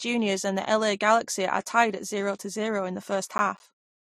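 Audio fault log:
throughout: transcoding between lossy codecs. Two layers of compression damage are heard together: a watery, smeared quality on the speech under a second, grainier layer of warbling artefacts, with everything above 15.1 kHz gone. This likely comes from a low-bitrate MP3-like encode that was then re-encoded to something like Vorbis, with the second codec spending its bits reproducing the first one's errors. A spectrogram shows a hard ceiling at 15.1 kHz and speckled, patchy high-frequency energy beneath it.
3.38–4.01 s: processor overload crackle. For about 0.6 s a gritty, tearing crackle rides over the speech and then stops. The audio is breaking into tiny dropouts, roughly ten of them, each about 10 ms long, which points to short processing buffers repeatedly missing their deadlines and being replaced with silence. Every abrupt cut in and out clicks. The waveform shows a comb of brief silent gaps with sharp edges, and the spectrogram shows thin vertical broadband streaks at each gap.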